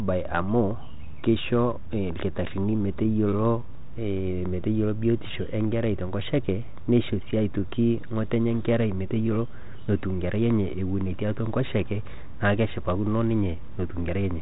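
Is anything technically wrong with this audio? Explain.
No, the speech comes through a G.726 ADPCM path at 32 kbit/s that is working as it should, which leaves the band topping out around 3.8 kHz and adds only a light coding texture, exactly what a telephone-grade link of this kind is expected to produce.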